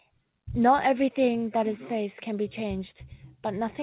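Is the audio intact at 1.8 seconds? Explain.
Yes, the audio is intact at 1.8 seconds, with the speech carried normally through the WebRTC call path and its G.711 mu-law coding, which leaves nothing above 4 kHz.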